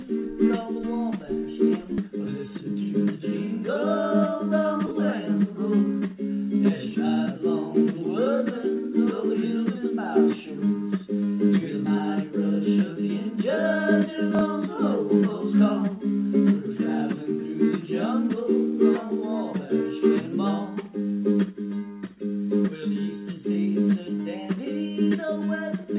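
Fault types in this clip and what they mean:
Skip ahead: at 1.98 s playback jumps forward with no fill, dropping roughly a second of audio as queued material plays straight on. The waveform shows an abrupt splice with no silent gap, and the spectrogram a sudden discontinuity where the spectral content changes without transition.
Jitter buffer speed-up: from 2.08 to 3.75 s the receiver shortens the backlog by repeatedly cutting out pitch-period-sized slices, so the sound runs about 11% fast at unchanged pitch, around a fifth of a second removed overall. Spectrogram harmonics keep their spacing while events compress in time.
Chunks out of order: at 4.87 s one 20 ms chunk plays one chunk late, and at 14.35 s a 20 ms chunk plays two chunks late, each heard as a brief jumbled moment. The waveform shows three hard joins in each spot. The G.711 mu-law call path leaves nothing above 4 kHz throughout.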